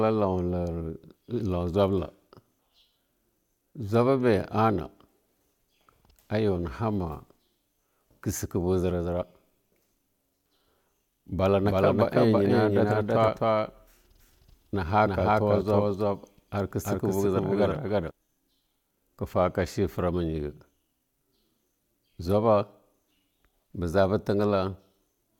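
At 2.58 s there's a quick glitch from damaged data in the compressed stream. Corrupted bytes make the decoder misread a frame and lose sync, so it skips ahead to the next frame header. Around 11.6 s a doubled audio track kicks in abruptly: the speech runs twice, with a dry copy trailing about a third of a second behind at roughly the same level. That's likely an edit or second capture path holding two out-of-step copies. It cuts off just as suddenly at 18.1 s. At 13.27 s, inside that stretch, the stream damage glitches again.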